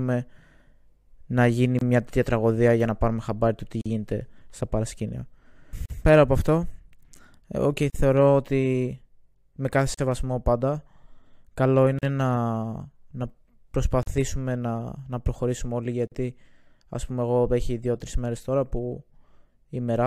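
Separately encoded pieces were joined untrimmed, leaving encoder delay and padding in: a gap at a join of encoded pieces every 2 s. Silence cuts in at 1.79 s (25 ms), then 43 ms at 3.81, 5.86, 7.90, 9.94, 11.99, 14.03 and 16.07 s, with smeared edges.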